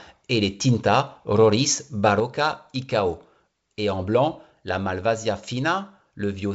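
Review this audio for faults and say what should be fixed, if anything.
From 2.20 s, speech and background noise drop together by about 5 dB to the end, a sudden gain jump likely caused by an unramped gain change. To prevent this, apply gain changes with a short ramp of a few milliseconds instead of switching between samples.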